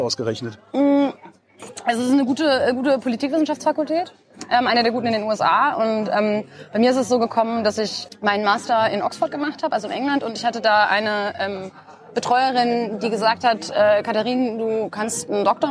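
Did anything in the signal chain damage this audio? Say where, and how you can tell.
No, nothing audible in this signal points to damage at any stage of the chain.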